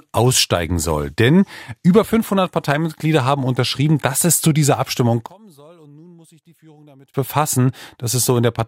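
One channel inverted, 5.26 to 7.14 s: the speech falls about 29 dB, likely because one channel's reversed polarity cancels the centre in mono.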